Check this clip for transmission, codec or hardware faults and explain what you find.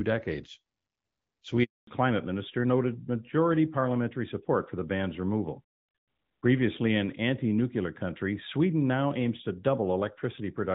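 Two faults: a handover gap, followed by a fallback to narrowband that lasts to the end of the clip.

Handover gap, 1.63 to 1.87 s: during a network handover no speech frames arrived, so the speech drops out within milliseconds and stays silent for 240 ms.

Fallback to narrowband, from 1.87 s onward: after the handover the call dropped from HD Voice to a narrowband codec, which fits a switch from AMR-WB at 12.65 kbit/s to AMR-NB at 12.2 kbit/s. Everything above 4 kHz disappears, so the speech sounds duller and rougher than the lightly coded wideband speech before the gap.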